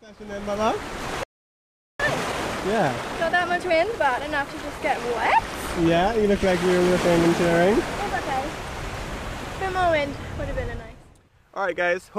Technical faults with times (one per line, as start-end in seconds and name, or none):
1.23-2.00 playback stall
2.00-5.00 time-compressed catch-up